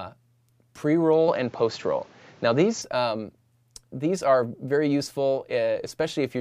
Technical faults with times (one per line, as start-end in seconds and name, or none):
1.28-2.82 input switched to a poorer device